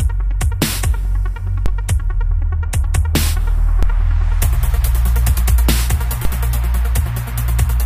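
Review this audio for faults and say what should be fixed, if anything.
There's a DC step at three points: 1.66 s, 3.83 s and 6.25 s. Each time, the waveform's zero line suddenly jumps by about -6 dBFS, then drifts back as a 5 Hz high-pass pulls the offset away. Each jump lands as a low thump or click, while the sound carried on top goes on unchanged. That pattern fits a converter recalibrating or an offset-carrying input being switched in. To prevent it, keep input switching and converter recalibration out of the recording path.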